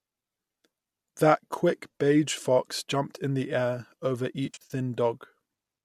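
From 4.46 to 4.74 s the speech breaks into smeared, noisy, phasey patches: AAC frame loss with concealment, likely in the low-delay AAC stream carrying it. About 170 ms of audio went missing in runs of up to about 70 ms, and the decoder filled each hole from the last good spectrum. Unlike a plain dropout, there are no hard silent gaps or clicks.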